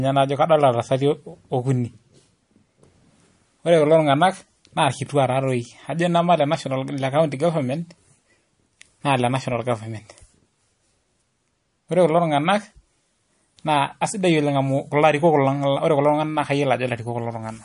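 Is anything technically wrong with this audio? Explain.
Yes. Throughout the clip the speech has a watery, swirling quality, sibilants come out as metallic chirps, and nothing is present above 10.6 kHz, so the top end sounds dull and boxed in. This is likely MP3 compression at a low rate, which fits a bitrate around 40 kbps: short of bits, the encoder cuts the treble at a fixed point and drops weak frequency lines that then flicker on and off from frame to frame.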